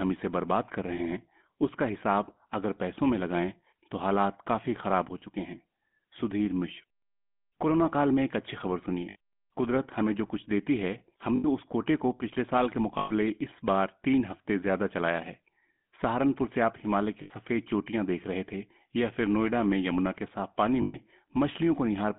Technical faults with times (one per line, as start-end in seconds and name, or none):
0.00-22.18 GSM full-rate codec
9.10-9.16 lost GSM frames
11.36-11.46 lost GSM frames
12.98-13.11 lost GSM frames
17.22-17.31 lost GSM frames
20.82-20.97 lost GSM frames